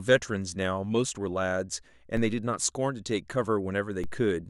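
At 2.17 s and again at 4.04 s the speech carries a DC step: the waveform's zero line jumps by about -26 dBFS and then drains away slowly, as through a 2 Hz high-pass. Each jump is heard as a low thump beneath the unchanged speech.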